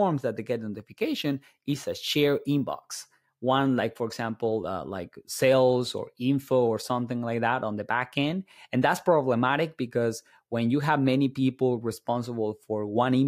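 From 0.74 to 3.1 s the speech picks up a gritty, inharmonic fizz that rides on louder and brighter sounds. That's crude rate conversion, likely a 32 kHz to 48 kHz change done by repeating samples without filtering, leaving error tones about 25 dB down.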